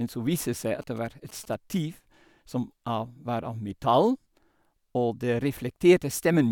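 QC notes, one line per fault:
0.82 to 1.78 s, GSM signalling bursts: a galloping dit-dit-dit of short 217 Hz buzzes, well below the speech. A nearby 2G phone's radio bursts are being rectified by the audio circuit.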